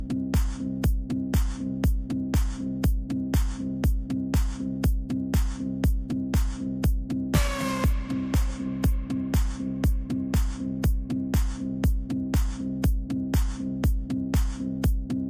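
Nothing here catches the ear as a technical problem; the sound simply runs its course without any fault to point to.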